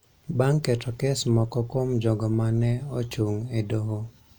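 No technical faults are audible anywhere in the speech.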